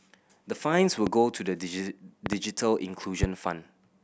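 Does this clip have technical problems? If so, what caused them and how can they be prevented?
Yes. A sudden voltage step, likely from a loose plug, a switch, static discharge or a driver glitch, entered the signal chain three times, and the circuits downstream shaped each step into a short spike. The result is a loud pop: a single sharp pop at 1.07 to 1.09 s and at 3.23 to 3.26 s, each about 15 dB above the speech, and a double pop at 2.26 to 2.35 s, about 20 dB above it. The speech continues underneath each one. To prevent this, secure and ground all cables and connectors, and avoid switching equipment or touching the gear while recording.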